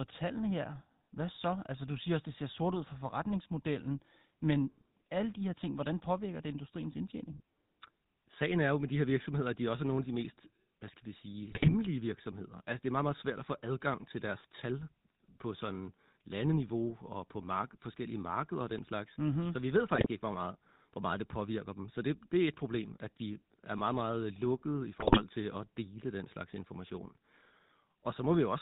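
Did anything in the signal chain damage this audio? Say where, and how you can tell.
Yes. The GSM full-rate codec damaged the whole clip. The speech is buzzy and gravelly with nothing above 4 kHz, which fits 13 kbps pulse-excited coding.

GSM bit errors on the radio link cause squawks and gargling at 11.48–11.75 s after "mest hvad skal vi", 19.94–20.07 s, and 25.00–25.23 s. Corrupted filter and gain values distort each frame.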